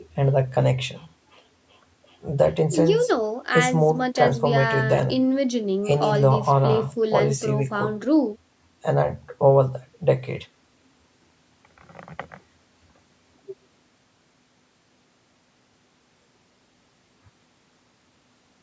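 No technical faults occur at any point in the speech, which has passed through ordinary call microphone processing with nothing above 8 kHz.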